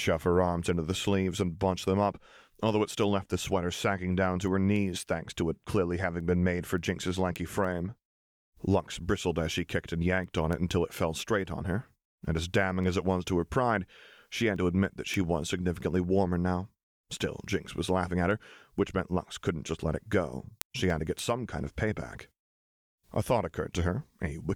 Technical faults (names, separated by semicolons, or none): word clock ticks